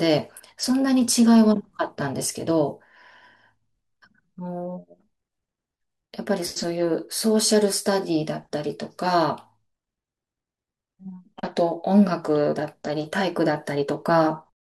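No technical faults in this speech; the only level change is a smooth editor's fade-out over roughly the last few hundredths of a second, finishing at 14.54 s with no click or hard edge.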